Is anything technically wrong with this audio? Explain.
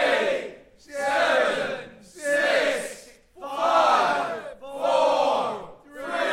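Yes. Compressed frames skipped at 4.52 to 4.54 s: a few consecutive frames of the encoded stream were never played, either because they are missing from the file or because the decoder rejected them as corrupt. Playback jumps forward by roughly 70 ms of audio, which points to about three frames. The sound abruptly advances past the missing stretch.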